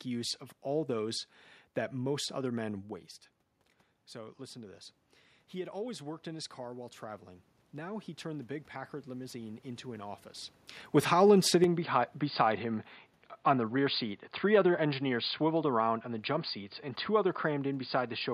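After "listen to this", from 5.53 to 10.27 s, automatic gain rising lifts voice and background together by about 6 dB, a slow envelope swell on the waveform.

From 11.64 s to the end, speech abruptly turns duller with no gap or level jump. The spectrogram shows nothing above 4.8 kHz, and a new faint noise floor appears. The likely cause is the input switched to a poorer device.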